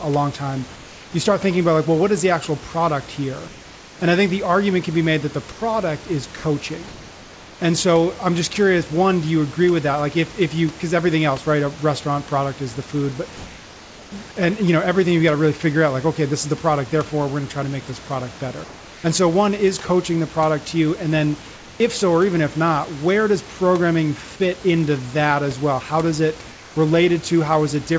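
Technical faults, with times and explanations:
5.52–5.60 s after "be made that the", 6.88–7.60 s, 18.64–19.04 s between "to make this product" and "and so one is", and 26.52–26.76 s after "well how does it": comfort noise in place of the background. The room background, about 22 dB below the speech, becomes a steady, featureless hiss about 2 to 3 dB quieter. The likely cause is that the sender's voice detector paused transmission and the receiver filled each gap with synthetic noise.
6.36–6.44 s: sound dropped by the voice detector. About 70 ms of speech vanishes into 80 ms of flat synthetic noise, then the signal returns. The sender's voice detector likely took quiet speech for background and stopped sending, so the receiver substituted comfort noise.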